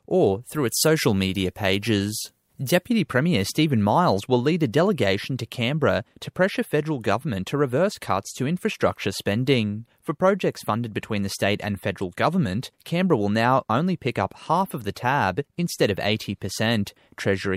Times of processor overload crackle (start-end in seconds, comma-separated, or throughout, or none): none